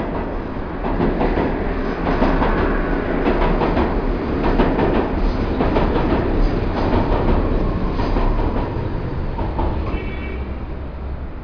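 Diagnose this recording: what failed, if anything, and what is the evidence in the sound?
Nothing in the signal chain failed: the audio keeps continuous timing throughout, with no audible interruption, distortion or tonal change at any stage from capture to playback.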